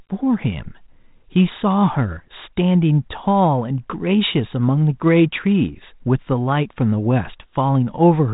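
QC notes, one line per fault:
Nothing here needs flagging; the speech has the narrow telephone-band sound of a 32 kbit/s G.726 link, which is how that path normally sounds.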